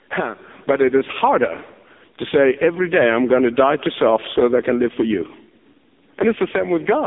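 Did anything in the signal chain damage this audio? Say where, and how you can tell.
Yes. Gain pumping, likely from an over-driven limiter early in the chain: the gain ducks about 10 dB under each loud syllable, throughout.

The codec stage has done heavy AMR narrowband mobile codec damage: nothing above 3.8 kHz, with buzzy, synthetic speech that fits a very low bitrate near 5 kbps.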